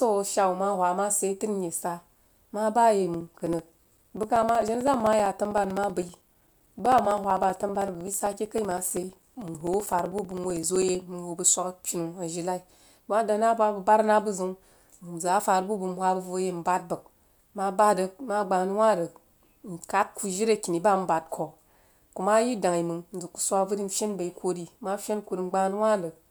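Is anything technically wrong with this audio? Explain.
Yes. Periodic USB or driver dropouts run from 3.14 to 11.02 s: every 64 ms something stalls the audio path, and a few milliseconds of the speech are lost and replaced by silence. The result is a steady ticking, about 15 per second, heard only under the speech.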